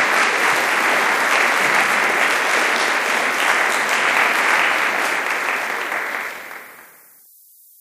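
From start to finish the audio shows low bit depth with noise shaping. The signal is held to about 9 bits, and the rounding error from each step is fed back so that the noise is pushed up the spectrum rather than spread evenly. The result is a steady, thin hiss that climbs strongly toward the top of the band, sitting roughly 25 dB below the signal and never dropping out between sounds.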